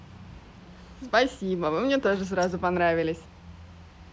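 No technical fault can be heard anywhere in the recording, and the signal stays intact throughout.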